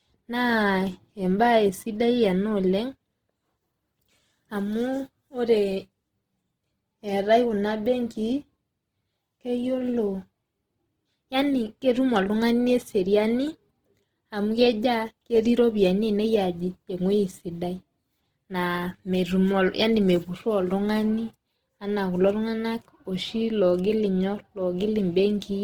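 Speech throughout, with plainly audible codec damage across the whole clip: the voice sounds rough and grainy, with a noisy texture where cleaner harmonics should be, yet the top end still reaches about 20.2 kHz with no narrowing or muffling. That pattern points to Opus compression in its music (CELT) mode, likely at a low rate around 16 kbps, where starved bands are filled with folded or noise content instead of being left empty.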